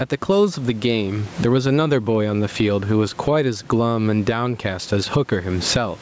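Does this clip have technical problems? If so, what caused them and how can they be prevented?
Yes. Gain pumping runs through the whole speech clip: loud and soft parts are squashed closer in level, with a gain swing of roughly 15 dB. The likely cause is microphone gain set far too high, forcing a fast limiter to clamp down repeatedly. On a waveform the envelope looks flattened, with the noise floor visibly rising between peaks. On a spectrogram the background band brightens in the gaps. Lowering the input gain so the limiter rarely engages prevents it.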